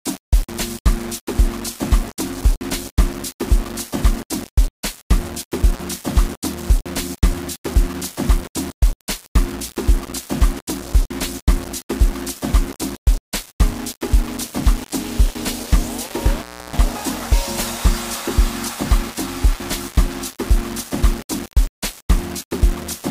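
The audio is grainy throughout, with distortion that tracks the signal and sits only about 15 dB below it. The likely cause is low bit depth without dither, consistent with rounding to roughly 5 bits. An intermittent contact cuts the sound with edge crackle from 5.74 to 5.82 s, open about 39 ms, and again from 16.36 to 16.79 s, open about 313 ms.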